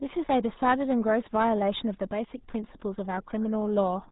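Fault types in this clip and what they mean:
RealAudio 14.4 codec: A very low-rate speech codec built for dial-up modems. The damage here is heavy and lasts throughout. Nothing above 3.8 kHz passes, so the speech sounds muffled and gargly. The result fits an 8 kbit/s stream.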